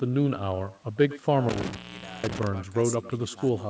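From the start, every phrase is trailed by a faint, thin copy arriving roughly a tenth of a second later and sitting about 18 dB below the speech. This is echo with no canceller: the far end's loudspeaker feeds its microphone, and nothing removes the returning signal.

Between 1.49 and 2.47 s the speech breaks off with crackle at both edges, leaving a gap of about 0.48 s filled by faint hiss. That points to an intermittent contact, a loose cable or plug briefly opening the line.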